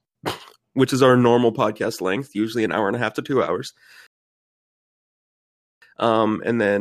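At 4.07 s the speech stops dead and falls silent. This is a rebuffering stall. The player used up its downloaded audio and had to wait for more to arrive. Playback picks up again at 5.82 s, exactly where it broke off. No speech is skipped or repeated. The gap simply inserts about 1.75 s of dead air. The result is an abrupt, unnatural pause mid-flow.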